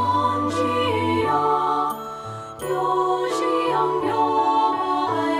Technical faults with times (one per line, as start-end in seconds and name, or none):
none